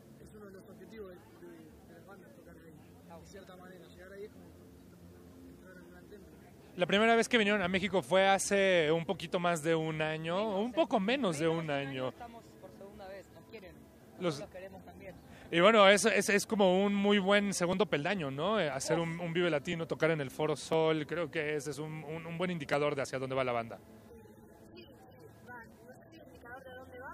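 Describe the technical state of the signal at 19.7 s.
A regular tick falls about once a second here, part of a run from 17.73 s to 26.73 s: periodic USB or driver dropouts. Something stalls the audio path every 1.0 s, and a couple of milliseconds of sound are skipped outright, leaving a small jump.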